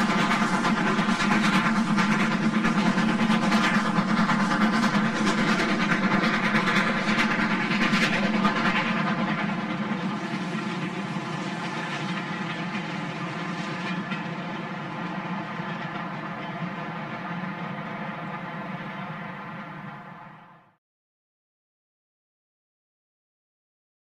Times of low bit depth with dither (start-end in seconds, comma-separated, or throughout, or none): none